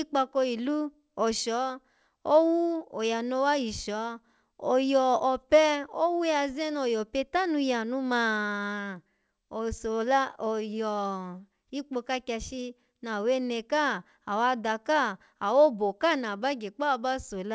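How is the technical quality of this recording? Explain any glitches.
Nothing in this speech recording stood out as a glitch on listening, and the only clear trait of the call path it went through is that the sound stops at 8 kHz, as that codec does.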